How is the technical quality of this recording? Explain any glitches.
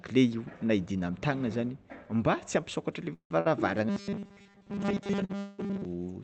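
The recording has several delivery faults clustered in its second half, all typical of a real-time call link. The top end cuts off around 8 kHz, consistent with an Opus call codec running near 32 kbps.

Call audio freeze at 3.13–3.32 s, right after "ampisokatra le", and again at 5.39–5.60 s. Packets were most likely held up in transit, so the jitter buffer ran dry. The receiver extended the last sound as a fading buzz for about 0.17 s and 0.19 s. The first freeze decays into roughly 90 ms of silence; the second never reaches silence. Playback then resumes where it stopped, so nothing is lost, only delayed.

Short stall from a late packet at 3.40–3.47 s and 5.25–5.31 s. A single packet missed its playout slot. The receiver stretched the preceding sound by about 48 ms and 43 ms until it arrived, producing a briefly held, slightly buzzy sound with no audio lost.

Robotic sound from repeated short buffers from 3.89 to 5.85 s. 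Fresh audio arrived too rarely, likely because of irregular delivery, so the software looped the last fragment of audio while skipping real content. The repeat rate imposes a fixed 200 Hz buzz, which fits a 5 ms loop. Most of that stretch sounds rigid and metallic, though it still loosely follows the original.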